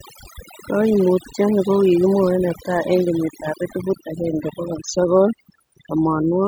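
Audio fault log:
Throughout: overdone noise removal. A noise reduction stage set far too strong pulls individual frequency bands down or out whenever they sit near its noise estimate. The background drops and breaks up into twinkling specks, and quieter parts of the speech vanish with it.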